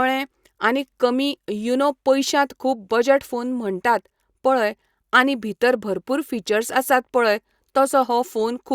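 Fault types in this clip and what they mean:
No fault types can be heard in this clip.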